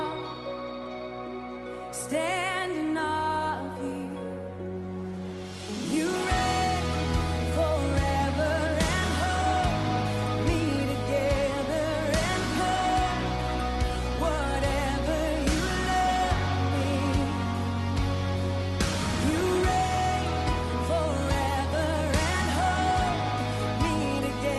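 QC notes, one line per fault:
No faults detected.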